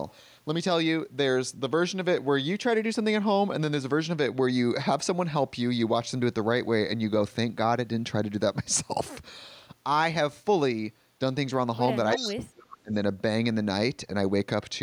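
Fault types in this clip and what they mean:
echo leak: A copy of the speech returns 337 ms late, likely through an incomplete echo canceller. There is a faint scrap at 11.89–11.96 s, then a much louder one at 12.13–12.33 s.
speech suppressed in double talk: From 12.15 to 12.93 s the speech drops in pieces by as much as roughly 35 dB, likely because the canceller turned down its own talker along with the loudspeaker echo during overlap.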